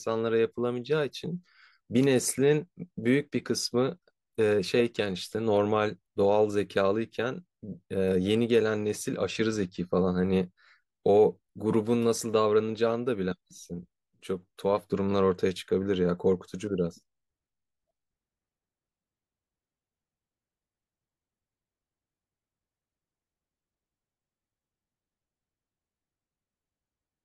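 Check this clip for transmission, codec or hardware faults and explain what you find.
No transmission, codec or hardware faults.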